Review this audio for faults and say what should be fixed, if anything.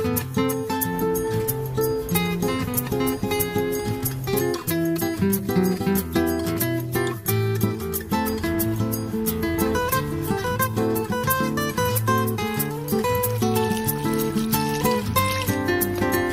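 Nothing stood out on listening, so there is nothing here that needs fixing.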